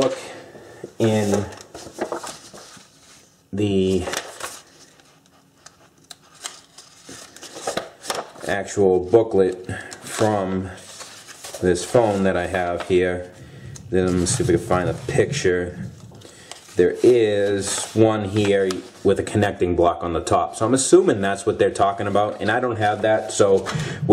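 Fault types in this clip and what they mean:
No technical faults are audible in this audio.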